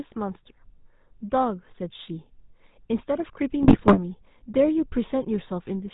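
From start to finish the speech has been squeezed through the GSM full-rate codec. The coder models the vocal tract as a filter and drives it with a sparse, regularly spaced pulse excitation, keeping only one excitation sample in three, and it discards everything above 4 kHz. The result is a plainly audible buzzy, gravelly roughness over the whole clip, with dull, band-limited highs, which fits the 13 kbps full-rate coder.

Between 3.62 and 3.99 s, GSM bit errors strike. Corrupted bits reach the decoder, so the transmitted filter, pitch and gain parameters arrive wrong for a run of frames. That bends the spectral shape and throws the level around frame by frame. The speech breaks into squawks, pops and gargling for that stretch. The damage hits roughly 16 of the 20 ms frames, consistent with close to 3 percent of bits flipped.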